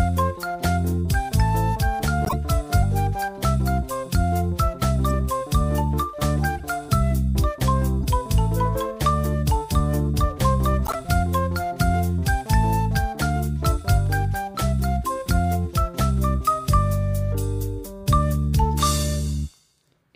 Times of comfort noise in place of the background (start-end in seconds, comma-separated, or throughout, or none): none